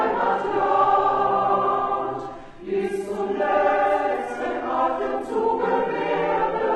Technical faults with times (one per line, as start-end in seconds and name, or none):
1.27-6.75 adaptive stream at a lower bitrate